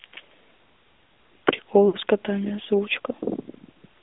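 AMR narrowband mobile codec, throughout: the speech is confined to roughly 250 Hz to 3.6 kHz, and the vocal-tract model driven by sparse pulses leaves a plainly audible buzzy, synthetic edge, which fits the 10.2 kbps AMR-NB mode.

Lost AMR speech frames, from 1.88 to 1.97 s: corrupted frames were rejected, so the decoder repeated the last good pitch and vocal-tract settings at falling gain. The speech smears and sags briefly before recovering, which points to about three missing 20 ms frames.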